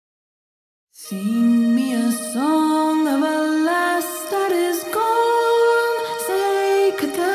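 No technical faults can be heard anywhere here.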